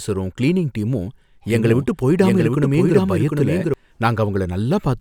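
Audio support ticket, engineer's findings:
Doubled audio track, 1.50 to 3.74 s. Full-band copy about 0.7 s late, about 5 dB down, no decay, abrupt on/off. Spectrogram: shifted echo of speech patterns. Likely second capture path or misaligned edit.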